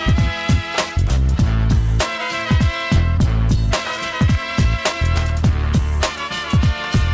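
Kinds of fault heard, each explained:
Skip ahead: at 2.96 s playback jumps forward with no filler, dropping around 0.7 s of audio, so the sound on either side is butted together. The waveform shows an abrupt splice with no silent gap, and the spectrogram shows a sudden break in its patterns.
Jitter buffer speed-up: from 3.17 to 5.00 s the receiver trims many tiny pitch-period slices, about a fifth of a second in all, so the audio runs 10% faster at unchanged pitch. Harmonic spacing stays constant on the spectrogram while events crowd closer together in time.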